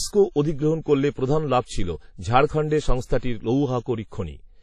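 From start to finish the speech carries heavy transform-codec damage, most likely WMA compression at a low bitrate, which fits about 32 kbps. Nothing remains above 13.8 kHz, and a washy, ringing hiss rises and falls with the signal, unlike steady background noise or a simple low-pass filter.

From 3.18 to 3.23 s there is pre-echo. A sharp attack sits late in a coding block, so quantisation noise meant for the loud part smears about 47 ms backward into the quiet before it. A brief hiss precedes the onset and softens it. Reverb or echo would trail after the attack instead.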